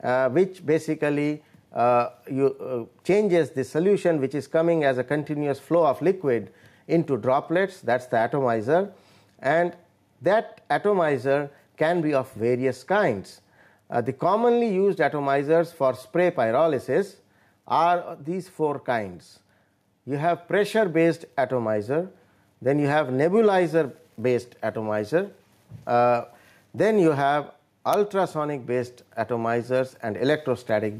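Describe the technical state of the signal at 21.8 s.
At 21.8 s, as throughout the clip, there is gain pumping: input gain is likely far too high, so a fast limiter clamps loud sounds, ducking the background by about 5 dB.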